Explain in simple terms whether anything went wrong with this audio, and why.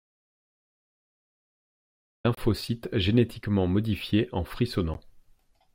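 Two problems are audible in this speech clip.

The clip opens in an audio dropout to silence. From the start until 2.25 s there is total, dead silence with no room background, and then speech begins mid-flow. This most likely means the input was cut off while recording continued. Anything said during that time is lost.

There are also two brief Bluetooth dropouts, short holes in the speech. One runs from 2.35 to 2.37 s, about 27 ms, just before "génétiquement modifiés en". The other comes at 4.94 s, about 13 ms, right after "génétiquement modifiés en". The likely cause is wireless audio packets arriving too late and being skipped. The speech carries on afterwards as if it had continued underneath.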